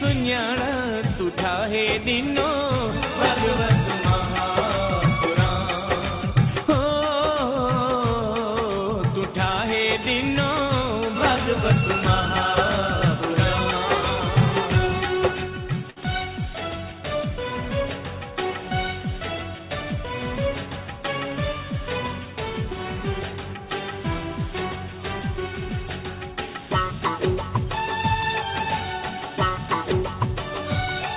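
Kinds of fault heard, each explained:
Burst of packet loss: at 15.9 s the receiver stretches the last sound for about 60 ms, fading it, then resumes with about 60 ms skipped. Unlike a plain dropout to silence, the gap is filled with smeared sound and material is lost.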